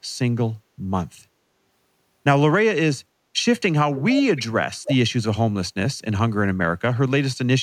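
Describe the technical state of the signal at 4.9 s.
At 4.9 s a second copy of the speech sits just behind the original, from 4.84 to 4.96 s, trailing by about 305 ms and only slightly quieter than the direct voice, so the line briefly sounds doubled. This is an echo leak, likely from one side playing the call through a loudspeaker whose echo canceller let part of the microphone pickup of that sound pass back down the line.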